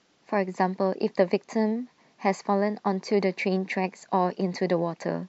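Nothing in this bit of speech points to a technical problem; there's no fault to flag anywhere in it.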